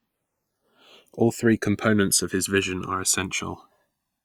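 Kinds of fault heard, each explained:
Channels drifting apart: The two channels run on separate clocks that disagree by a few hundred parts per million. The delay between them slowly grows to about a millisecond. Summed to mono, comb notches sweep through the speech, heard as slow flanging throughout.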